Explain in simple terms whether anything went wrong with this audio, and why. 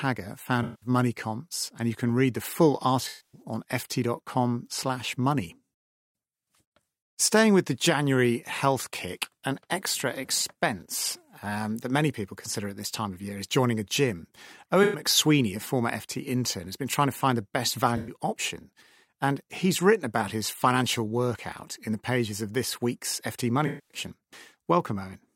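AAC frame loss with concealment affects this speech at 0.63, 3.08 (after "can read the full"), 14.83 (between "is joining a gym" and "a former"), 17.97 (after "to find the best") and 23.66 seconds. Each time, a short run of compressed audio, roughly 0.1 to 0.26 seconds long, went missing. The decoder filled the gap by guessing from the last sound it received, so these spots come out smeared and noisy instead of clear.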